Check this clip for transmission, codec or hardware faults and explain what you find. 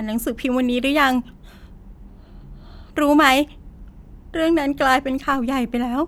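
One hardware fault is audible in this speech clip: a DC step near the end.

At 5.33 s the waveform's zero line suddenly jumps, as when a converter recalibrates or an offset input switches in. The step is about -28 dBFS and then decays back toward zero through a roughly 2 Hz high-pass. It is heard as a single low thump under unchanged speech. On the waveform the baseline shifts abruptly and then slowly recovers, and a spectrogram shows a brief low-frequency vertical smear.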